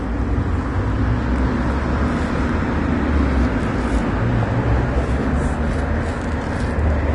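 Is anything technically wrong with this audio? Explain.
Yes. Throughout, the audio sounds hissy and grainy, with roughened tones, blurred attacks and nothing above about 10.6 kHz. This is likely Vorbis compression at a low bitrate, around 32 kbps, where coarse treble quantisation turns fine detail into noise-like residue.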